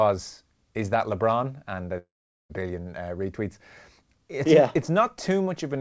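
From 1.98 to 2.51 s the speech cuts out, likely a long network dropout. The last sound is stretched into a fading buzz, then about 0.42 s of near-silence, and speech resumes with part missing. The waveform tapers to a flat line. The spectrogram shows smeared bands dissolving into a blank gap, all below the 8 kHz ceiling of the G.722 call path.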